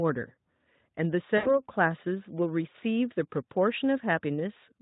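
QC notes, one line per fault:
1.37–1.62 s, VoIP packet loss concealed by the speech codec: about 80 ms of audio drops out, which fits four lost 20 ms frames, and the Speex decoder fills the gap by repeating its last pitch and spectral envelope at falling gain, so the speech smears into a buzzy tone or coloured noise that fades. On a spectrogram, flat, evenly spaced harmonics run on with no formant movement and dim out. The waveform shows a repeating periodic shape shrinking in amplitude, then weak, distorted recovery.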